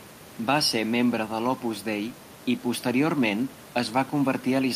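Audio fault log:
Nothing stood out on listening to this speech clip, with only the room's own background noise sitting about 23 dB below the speech.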